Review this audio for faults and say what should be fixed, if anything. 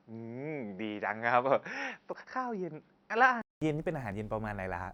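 From the start until 3.62 s the speech sounds dull and boxy, with nothing above 5.8 kHz, and a faint new background hiss sits about 45 dB below the speech. At the changeover there is a gap of about 200 ms before fuller, brighter sound returns, with little change in loudness. This is likely an input switched to a poorer device, such as a fallback microphone or a headset's call profile, whose narrow band and own noise floor shaped the first part. To prevent it, lock the recording to one chosen input and disable automatic device switching for the session.

At 2.13 s and again at 4.12 s there is a tiny click or skip where the waveform jumps, and a few milliseconds of speech go missing each time. The two events fall 2 s apart, matching a 2 s stream segment length. This is overlap between stream segments: neighbouring segments carried overlapping time stamps, so the player trimmed that span, removing sound that was not actually repeated and leaving a discontinuity. 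To prevent it, make segment time stamps contiguous so that each segment starts exactly where the previous one ends.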